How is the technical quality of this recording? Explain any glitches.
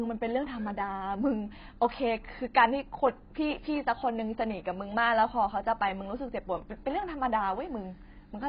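Heavy codec damage runs through the whole recording. AAC compression, present throughout: the likely cause is AAC-LC at a very low bitrate, consistent with about 16 kbps, discarding everything above 5 kHz and coarsely quantising what remains. The speech sounds dull and smeared, with warbling, fizzy sibilants.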